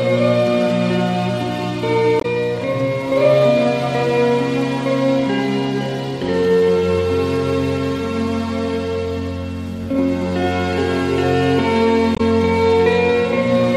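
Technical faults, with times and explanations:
2.18–2.25 s and 12.14–12.21 s: damaged data in a compressed stream. Corrupted bytes break the decoder's framing, so it misreads a few frames, loses sync and hunts for the next valid header, giving a roughly 70 ms glitch each time.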